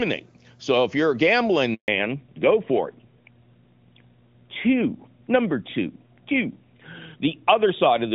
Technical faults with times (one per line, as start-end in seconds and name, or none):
1.74-1.88 handover gap
1.88-8.14 fallback to narrowband